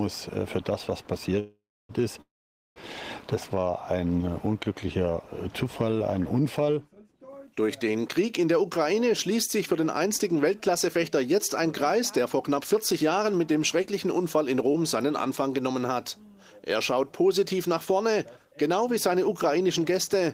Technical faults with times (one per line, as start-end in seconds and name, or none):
1.39-1.91 call audio freeze
2.21-2.78 call audio freeze
8.93-13.94 jitter buffer speed-up
14.67-16.60 jitter buffer speed-up
14.72-14.76 short concealed packet loss
17.73-20.21 jitter buffer speed-up